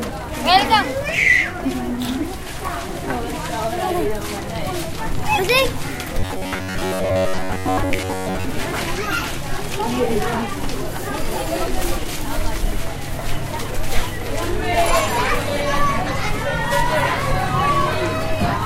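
From 6.20 to 8.45 s the everyday sound collapses into robotic sound from repeated short buffers: a rigid, metallic buzz pitched near 93.8 Hz that still loosely tracks the material's loudness. This likely comes from playback running short of fresh audio and looping roughly the last 10.7 ms over and over, which fits that buzz frequency, so most of the real signal in that stretch is skipped. Unlike mains hum, the buzz exists only while the loop runs and replaces content rather than sitting underneath it.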